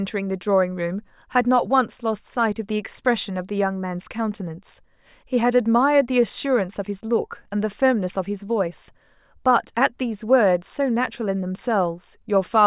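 No technical faults can be heard anywhere in the speech recording; the signal stays continuous and steady throughout.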